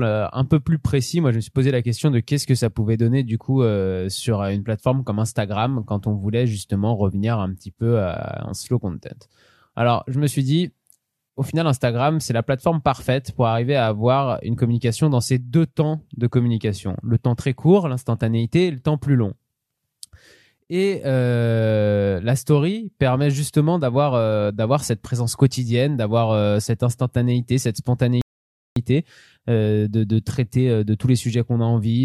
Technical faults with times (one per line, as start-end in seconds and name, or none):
28.21-28.76 rebuffering stall